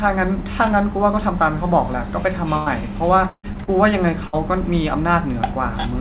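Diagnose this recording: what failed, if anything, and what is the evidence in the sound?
The network dropped packets, and you can hear it three times as a burst of packet loss: 2.57 to 2.69 s, 3.29 to 3.46 s, and 4.27 to 4.36 s. At each spot the receiver stretches the last bit of sound into a held, fading tail, then jumps ahead. Roughly 90, 150 and 60 ms of real audio go missing. The middle one runs long enough that the tail fades into about 70 ms of dead silence before the sound comes back.

Right after that big gap there are two smaller hits, short concealed packet loss at about 3.52 to 3.58 s and 3.64 to 3.70 s. Each loses around 30 ms, and the decoder papers over it by continuing the previous sound and blending back in. The result is a quick smear or wobble rather than a dropout. Clustered like that, these look like the same bad patch on the network. Everything sits under 4 kHz, which fits a G.711 A-law call path.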